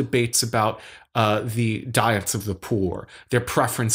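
Listening to this speech recording, nothing stood out as a technical problem at any point.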